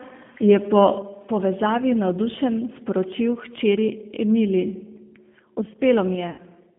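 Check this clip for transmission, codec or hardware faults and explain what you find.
Two faults are audible: plainly audible low-rate codec coloration across the whole speech clip, and one concealed packet loss near the end.

G.729 codec damage runs throughout. The speech is rebuilt at 8 kbit/s from a vocal-tract filter, pitch predictor and sparse pulses, so it sounds rough and synthetic, not just muffled. The band sits at roughly 150 Hz to 3.5 kHz. Simple telephone band-limiting would sound dull but clean.

VoIP packet loss concealed by the speech codec occurs from 6.30 to 6.40 s. About 80 ms of audio went missing, which fits four 20 ms packets. The decoder filled the hole by extending its last pitch and filter and lowering the gain, producing a buzzy tone or coloured noise that fades instead of a silent gap or click.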